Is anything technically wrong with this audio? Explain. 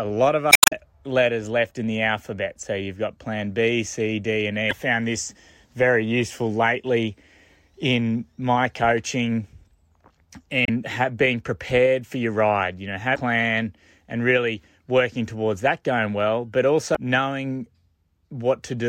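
Yes. Damaged data in a compressed stream breaks this speech at 0.49–0.73 s (after "lot of", adding about 17 ms), 4.68–4.73 s (before "found this very useful"), 10.64–10.70 s, 13.13–13.18 s and 16.92–16.97 s (after "that going well but"). The decoder misreads corrupted frames and resynchronises, producing brief chirps or squawks.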